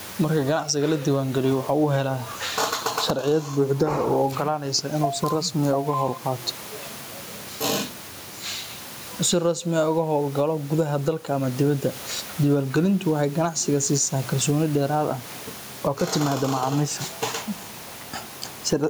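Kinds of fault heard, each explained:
Gain pumping: throughout the clip, the background room noise, about 29 dB below the speech, swells in each pause and ducks under every loud syllable, a swing of roughly 15 dB, likely from input gain set far too high with a fast limiter clamping it down.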